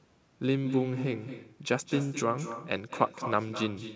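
Speech throughout is shadowed by a quieter, thinner copy arriving about a fifth of a second later and about 10 dB down, over a call band with nothing above 8 kHz. That is echo with no canceller: the far end's loudspeaker feeds its microphone, returning the talker's voice after the round trip.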